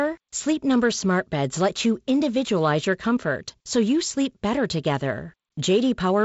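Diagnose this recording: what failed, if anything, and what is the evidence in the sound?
Nothing failed; no fault is audible in this speech.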